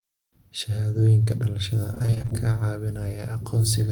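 A speech recording with two packet-loss faults. From 1.91 to 2.33 s there is repeated packet loss (robotic sound): a rapid string of short dropouts, the longest 27 ms, each patched by extending the preceding sound. Nearly half that stretch is synthetic fill, giving a choppy texture with fragments missing. At 3.09 to 3.17 s a short concealed packet loss removes about 20 ms of audio. The decoder bridges it by continuing the prior waveform, adding roughly 10 ms, and the spot is heard as a brief smear or wobble.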